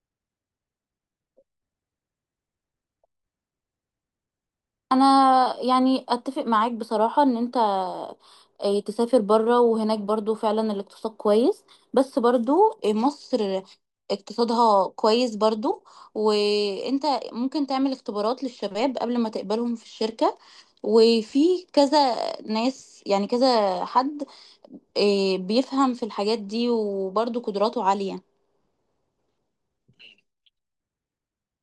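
No technical faults are audible.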